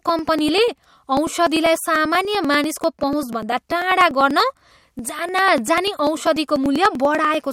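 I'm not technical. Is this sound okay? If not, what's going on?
No. Periodic USB or driver dropouts: something repeatedly stalled the audio connection, dropping tiny slices of speech roughly ten times a second from 0.09 to 7.44 s, causing steady ticking.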